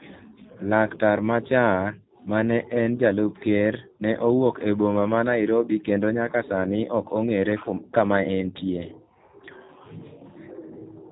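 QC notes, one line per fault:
throughout, G.729 codec: speech sounds plainly rough and slightly synthetic, muffled with nothing above 4 kHz. Each 10 ms frame is rebuilt from a vocal tract filter, pitch predictor and sparse pulses, a coarse model that fits an 8 kbit/s G.729A stream.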